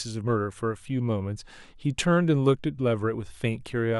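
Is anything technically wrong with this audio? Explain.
No, nothing technically wrong can be heard here.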